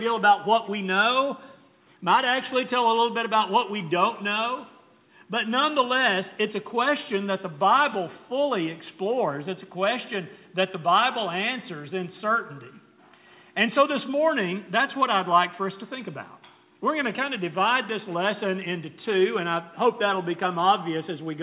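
There are no technical faults to describe in time order; the audio comes through a G.711 mu-law call path at 64 kbps, which leaves nothing above 4 kHz.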